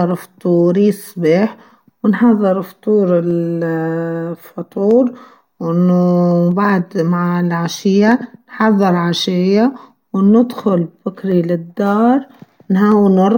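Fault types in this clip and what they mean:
Clock drift buffer slips: A regular click cuts into the speech every 1.6 s, from 0.11 s to 12.92 s. There are roughly ten. Each is likely a slip of a few samples, as a buffer between two free-running clocks, around 100 ppm apart, overflows or runs dry.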